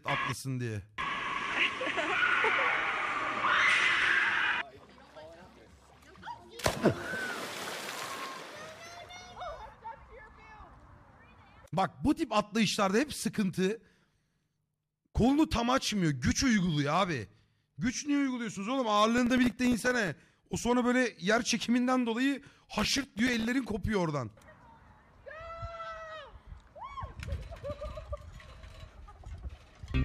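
From 19.18 to 20.08 s, and again from 22.79 to 23.48 s, processor overload crackle tears through the sound. The processor misses its deadlines over and over, and each late buffer plays as a tiny dropout of silence. The very short gaps point to buffers around a millisecond and a half, with dozens missed in each burst. The result is a gritty crackle. On a waveform, dense short notches appear, and a spectrogram shows a smear of thin vertical broadband lines across both stretches.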